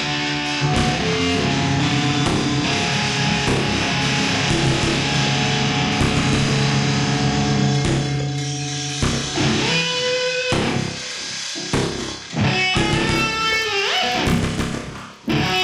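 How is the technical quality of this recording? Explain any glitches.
There is one glitch, in the last couple of seconds. From 13.12 s to the end at 15.6 s, the resampler restarted on every block. The audio was upsampled from 24 kHz to 48 kHz in separate 20 ms chunks, and at each chunk boundary the converter had no real neighbouring samples to interpolate from. Each edge gets a small error, and at 50 per second these blend into a buzz. Unlike mains hum, which stays put through pauses, this buzz rides on the sound and vanishes when the signal goes quiet.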